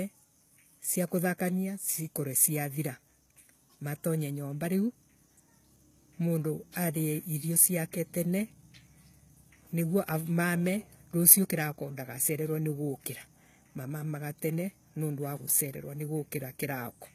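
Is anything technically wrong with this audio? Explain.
Yes. Throughout the speech there is clearly audible HE-AAC compression, likely at a low bitrate around 20 kbps. The treble is synthesized by copying lower bands upward, so s sounds turn gritty and metallic while nothing survives above 14.9 kHz. A plain low-pass would sound dull rather than falsely bright.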